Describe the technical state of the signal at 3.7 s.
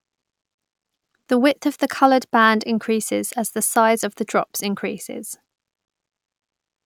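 At 3.7 s the speech signal is intact, with no audible fault.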